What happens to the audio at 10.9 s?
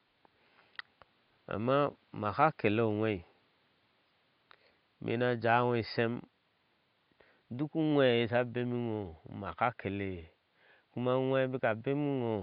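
Nothing goes wrong at 10.9 s: the speech carries on intact, with only the room's own background noise sitting about 42 dB below it.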